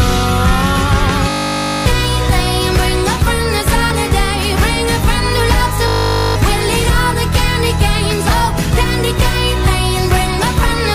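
At 1.3 s the audio gives way to a steady 50 Hz buzz that lasts until 1.86 s, and the same buzz returns from 5.88 to 6.36 s. Each is a system hang loop. The computer or its audio driver stalled while the sound hardware kept replaying one 20 ms slice of its ring buffer over and over, producing a tone at the loop rate. Each stall costs roughly half a second of audio.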